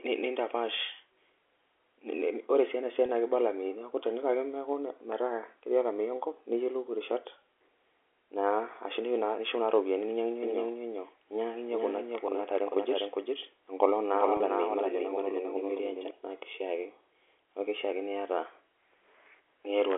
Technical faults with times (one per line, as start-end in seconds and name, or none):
3.06-3.09 packet loss with pitch repetition
10.43-16.11 doubled audio track
14.37-14.40 packet loss with pitch repetition